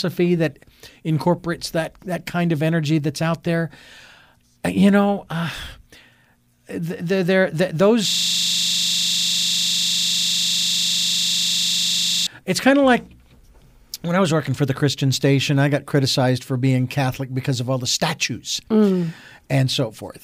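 Speech, with a system hang loop from 8.10 to 12.27 s, right after "they're they're they're". One 40 ms slice of audio repeats exactly, about a hundred times. This gives a steady 25 Hz buzz. The system froze while the sound hardware kept replaying its buffer.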